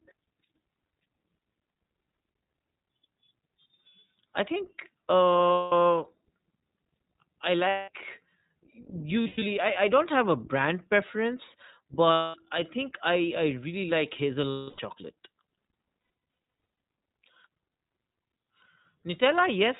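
Throughout the recording the speech sounds slightly rough and synthetic, and it is dulled by a hard ceiling at 4 kHz, with plainly audible coding damage. This is the iLBC codec at work. It is a narrowband VoIP coder that encodes each short frame's excitation independently of the previous frame. The character of the sound fits its 20 ms mode at around 15.2 kbps.

The clip also contains lost iLBC frames, heard as a held, faintly buzzy, breathy vowel in place of the speech. This happens at 5.52 to 5.73 s, 7.68 to 7.90 s, 12.12 to 12.37 s and 14.50 to 14.80 s, with gaps of 200 to 280 ms. Broken-up dropouts appear at 9.22 to 9.43 s and across 16.0 to 16.8 s, where no single gap runs longer than about a tenth of a second. In each case, missing packets forced the decoder to repeat the last pitch cycle mixed with noise. Because each frame stands alone, the speech returns cleanly as soon as packets arrive again.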